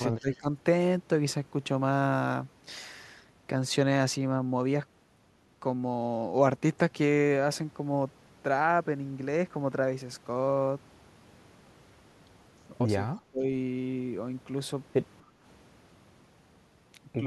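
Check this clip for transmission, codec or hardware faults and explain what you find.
The speech has four echo-canceller faults clustered around two moments of overlapping talk, plus one brief background dip.

Echo leak, 0.18 to 0.37 s and 13.15 to 13.21 s: a faint copy of the voice trails about 267 ms behind, about 25 dB and 30 dB down. The likely cause is a loudspeaker echo that slipped past the canceller.

Speech suppressed in double talk, 0.20 to 0.47 s and 13.30 to 13.44 s: the talker dips briefly, by roughly 15 dB and then 25 dB. The canceller likely mistook overlapping speech for echo.

Background gated by the echo canceller, 15.24 to 15.42 s: the room sound sinks by about 7 dB for roughly 0.2 s, then returns as the canceller releases the microphone.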